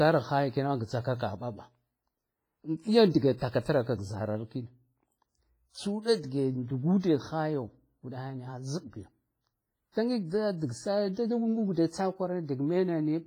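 A speech recording that was likely squeezed through a low-bitrate WMA compression encoder, which fits a rate of around 24 kbps. Its coarse quantisation leaves heavy damage throughout, with a washy, ringing quality and a hiss that swells and fades with the speech. Content runs up to about 21.4 kHz. At 7.00 to 7.03 s, just after "tsu uda dige", the same block-based coding causes pre-echo: noise meant for a sharp attack spills about 37 ms ahead of it, so a brief hiss precedes the onset and softens its edge.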